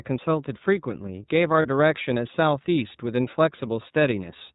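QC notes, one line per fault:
throughout: iLBC codec. The audio passes through a narrowband VoIP codec, which fits iLBC in its 13.3 kbps, 30 ms frame mode. Nothing above 4 kHz survives, and the speech carries a plainly audible rough, slightly synthetic edge from the coarsely coded excitation.
1.62–1.66 s: lost iLBC frames. Audio went missing for a stretch consistent with one 30 ms frame. The decoder concealed it by repeating the last pitch cycle blended with noise, so the gap sounds like a briefly held, buzzy vowel. Speech returns cleanly straight afterwards.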